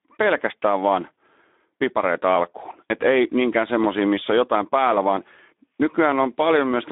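Throughout, a Speex codec at what sounds like about 11 kbps starves the excitation, leaving the speech hoarse and noisy, confined to roughly 200 Hz–3.6 kHz.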